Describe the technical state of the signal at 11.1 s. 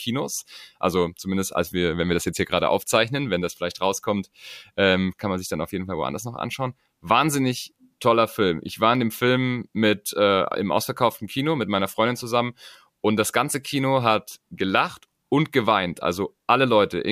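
Nothing at 11.1 s points to a fault; the speech signal is intact at that moment.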